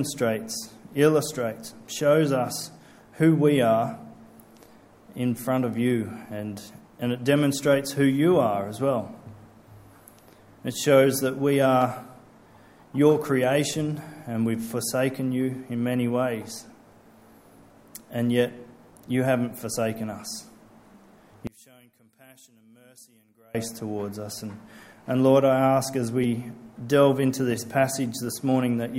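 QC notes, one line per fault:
21.47 to 23.55 s, one channel inverted: one stereo channel has likely flipped polarity, so material common to both sides cancels when summed to mono. The centred content collapses by about 30 dB, leaving only a faint residue of the channel difference.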